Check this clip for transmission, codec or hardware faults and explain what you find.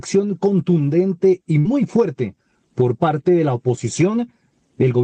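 One transmission fault is audible: a burst of packet loss.

At 1.59 to 1.68 s, the receiver loses a short run of audio. It extends the last sound for about 55 ms, fading it, then resumes roughly 40 ms later. On a spectrogram this shows as smeared, repeated texture darkening, then an abrupt jump.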